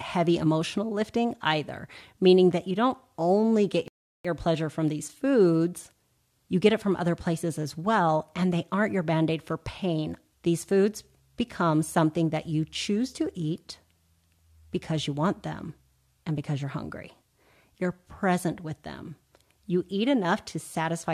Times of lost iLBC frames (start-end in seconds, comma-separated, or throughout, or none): none